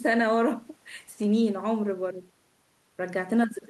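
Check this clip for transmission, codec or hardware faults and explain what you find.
No faults detected.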